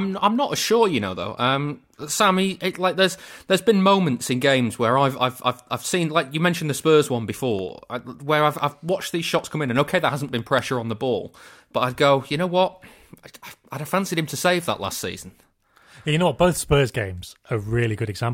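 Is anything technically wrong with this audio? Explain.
Yes. From 7.59 to 10.59 s, just before "on the ball but", the speech shows periodic USB or driver dropouts. Something is stalling the USB bus or audio driver every 0.1 s, and each stall costs a fraction of a millisecond of audio, which is replaced by silence. Each gap breaks the waveform abruptly, so the speech carries a steady ten-per-second ticking, about thirty small clicks in all, audible only where there is signal.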